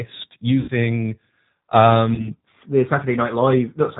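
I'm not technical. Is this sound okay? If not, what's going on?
No. The speech went through a G.729 codec, a compression scheme used for internet phone calls. Instead of sending the actual sound, it sends a rough description of the voice, and the receiving end rebuilds speech from that. Everything above about 4 kHz is dropped. The result is clearly audible throughout: the voice sounds dull, slightly rough and artificial, like a cheap phone line.

There is also VoIP packet loss concealed by the speech codec, twice. Chunks of data went missing on the way. The receiving end filled each gap by guessing, stretching out the last bit of voice it had and letting it fade. From 0.60 to 0.71 s, about 80 ms of sound was lost, and from 2.15 to 2.31 s about 30 ms. At those points the voice turns into a brief buzzy or smeared tone and stays weak for a moment after real sound returns.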